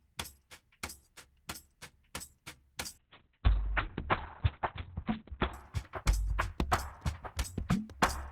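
From 2.99 to 5.59 s, a call bitrate drop from 32 to 6 kbps cuts the spectrogram's top from 20 kHz to 4 kHz, sounding muffled and rough.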